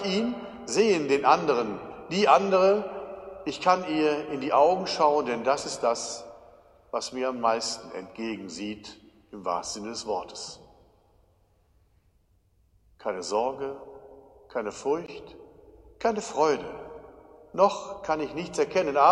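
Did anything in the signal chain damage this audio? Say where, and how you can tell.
Yes. At 15.06 s there's a 17 ms block of digital silence. That points to a driver buffer not filled in time: zeros replaced samples.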